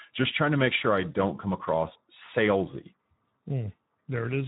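From start to finish, the speech carries Speex codec damage, and it is plainly audible. Speex is a CELP coder. It models the vocal tract with a filter and drives it with a coded excitation signal. Here the excitation gets too few bits. The speech sounds noisy and hoarse. The degree of damage fits a low Speex setting of around 11 kbps.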